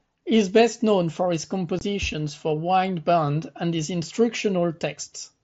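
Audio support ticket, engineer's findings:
Unconcealed Bluetooth headset packet loss, 1.79 to 1.81 s, between "best known for his" and "for wind band and". A gap of about 22.5 ms with hard edges, a brief dropout. The length fits three consecutive 7.5 ms mSBC frames lost on the radio link between headset and phone. Nothing fills the gap, so silence or an idle pattern replaces the audio. The link runs the mSBC wideband codec, with light grain on louder syllables.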